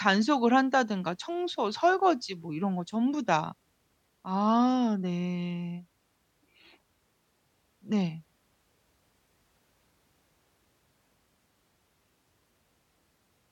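Nothing goes wrong anywhere in this bit of speech; there's simply no technical fault to point to.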